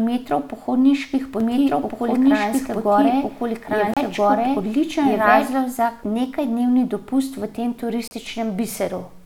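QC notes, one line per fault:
1.40–5.53 s, doubled audio track: the speech runs twice, a second full-band copy trailing by about a second and a half at roughly equal level, dry and starting and stopping abruptly, ending just before "za nekajdnevni dopust v"; likely a second capture path or misaligned edit.
3.94 s and 8.08 s, Bluetooth stall: brief dropouts to silence of 30 and 35 ms, the second right after "nekajdnevni dopust v tem", then the sound resumes; likely a wireless link starving the headphone buffer.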